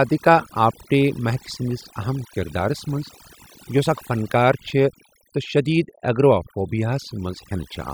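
A speech recording with overdone noise removal throughout. The noise reducer is set too aggressively, so individual frequency bands near its noise estimate are pulled down or gated off, taking quiet speech detail with them. The background collapses to near silence with twinkling specks. From 4.77 to 7.52 s there is timecode bleed. Linear timecode running at 30 frames per second leaks in as a square wave toggling between roughly 1 kHz and 2 kHz, heard faintly, around 45 dB down, as a steady chirping warble.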